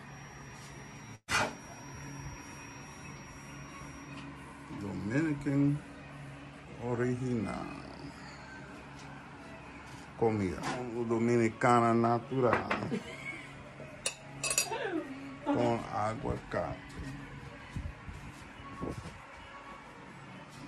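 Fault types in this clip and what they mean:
Burst of packet loss: from 1.15 to 1.30 s, packets went missing and the receiver filled a 122 ms gap by holding the last sound and fading it down, ending in 40 ms of silence; 120 ms of audio is skipped before playback resumes.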